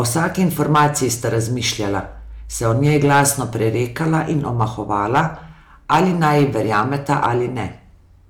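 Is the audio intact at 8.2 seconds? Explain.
Yes, the speech at 8.2 seconds is intact, with no audible fault at that moment.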